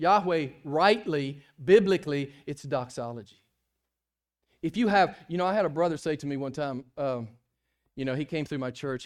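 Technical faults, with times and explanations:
No technical faults can be heard anywhere in the recording.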